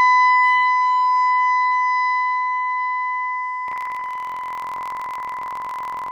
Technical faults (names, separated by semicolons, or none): buffer tearing